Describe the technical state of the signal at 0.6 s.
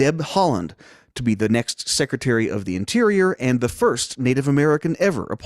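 At 0.6 s the speech signal is intact, with no dropout, distortion, glitch or other fault to be heard.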